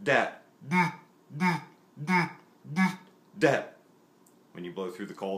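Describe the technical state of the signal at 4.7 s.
At 4.7 s the signal is intact, with no fault to be heard at that moment.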